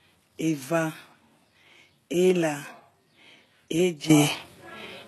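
From the start, the speech carries HE-AAC compression damage, likely from a low-bitrate encode that fits something around 16 kbps. Nothing survives above 12.3 kHz, and the rebuilt treble sounds synthetic, so s sounds come out gritty and lispy because the copied-up harmonics don't line up with the real ones.

At 4.1 s there's a sudden gain jump of about 13 dB that holds to the end. It's likely a level change applied without any ramp, so the speech and the background noise leap up together in a single step.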